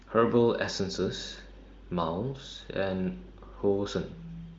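Speech over AMR wideband (HD Voice) at 23.05 kbit/s; no technical faults to report.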